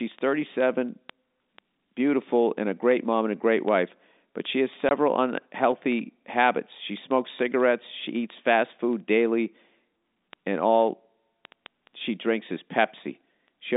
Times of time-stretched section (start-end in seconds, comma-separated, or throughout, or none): none